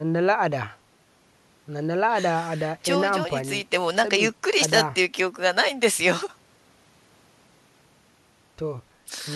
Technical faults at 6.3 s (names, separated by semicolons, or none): none